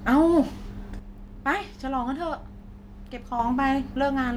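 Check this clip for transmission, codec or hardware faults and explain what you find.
One fault is present in this speech. One channel drops out from 0.99 s to 3.39 s: the level falls abruptly by about 6 dB and jumps back just as suddenly at the end. The likely cause is one stereo channel going silent for that span. When the two channels are summed to mono, material common to both loses half its contribution, so the sound turns quieter until both channels return.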